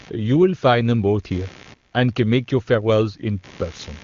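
Throughout the recording, computer activity noise sits under the speech: a buzzing chirp pulsing at around 70 per second and roughly 30 dB below the speech level. It comes from processor or peripheral load shifting the audio circuit's shared ground. The whole band stops near 7.2 kHz, as expected from AMR wideband (HD Voice) coding.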